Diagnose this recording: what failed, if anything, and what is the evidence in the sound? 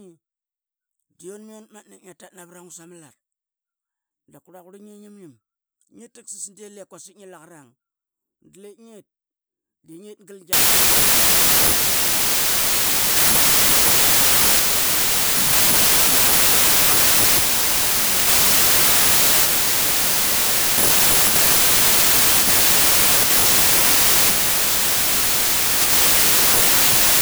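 From 10.53 s to the end, starting at "nget pama nugul angrarlang", loud noise swamps the speech, which plays slowed to 0.75 speed. It is a wrong sample width fault in sample-format conversion: 32-bit integers read as packed 24-bit, scrambling bytes. The spectrogram fills broadband.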